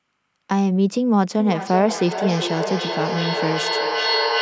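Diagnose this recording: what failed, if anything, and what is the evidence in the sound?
Two devices on the same call in one room formed an acoustic loop, producing a feedback echo between two devices from 1.39 s to the end of the recording. One device played the other's microphone feed aloud, and that microphone picked it up again. Each device's echo canceller removes only its own playback, so this path went uncancelled. The speech returns roughly every 0.4 s, with the strongest repeat about 3 dB below the direct speech.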